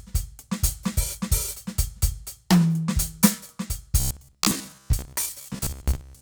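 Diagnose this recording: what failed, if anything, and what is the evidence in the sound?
The driver or buffer stage likely starved, with new audio arriving too seldom, so the playback path kept looping the last short block to fill the gaps. From 4.00 s to 6.21 s the music turns into robotic sound from repeated short buffers, a stiff metallic buzz near 66.7 Hz that loosely tracks the music. That buzz rate corresponds to a repeated block of about 15 ms, and most of the real audio in that stretch is skipped.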